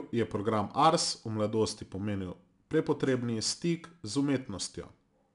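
Speech carrying a gritty hiss that rises with every loud syllable throughout, with nothing above 10.6 kHz: 4-bit ADPCM compression, its level-following quantisation noise consistent with an 89 kbps stream.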